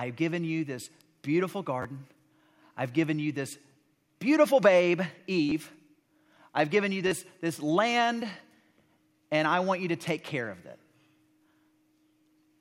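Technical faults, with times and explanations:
1.82–1.85 s, 5.49–5.52 s and 7.07–7.12 s, repeated buffer: fresh audio arrived late, so an 11 ms slice (fits a 512-sample buffer) replays two extra times, four at the last, each hard join giving a brief buzzy stutter.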